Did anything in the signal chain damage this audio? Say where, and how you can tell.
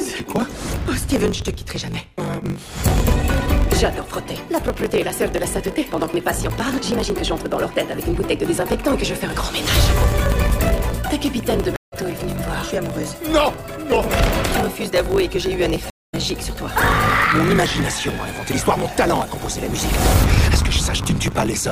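Yes. Throughout the clip there is a steady 50 Hz buzz, and the audio runs about 1.16 times too fast while its timbre stays where it should be. That combination points to a block size mismatch (truncated) at the driver or buffer stage. One stage writes blocks that fit 1024 samples, and the next reads fewer, so the tail of every block is discarded. Each cut repeats at the block rate, which produces the buzz. Because samples are skipped rather than resampled, the timbre is kept. A sample-rate error would shift the pitch along with the speed.

At the network and playback stage there are two stream reconnects. The first runs from 11.76 to 11.94 s, with about 183 ms of silence, and the audio resumes roughly a tenth of a second further on. The second runs from 15.90 to 16.15 s, with about 268 ms of silence, and the audio picks up around 150 ms later. A plain dropout would resume exactly where it stopped. 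Here the material jumps ahead, which shows the player lost the connection and restarted with a fresh decoder mid-stream.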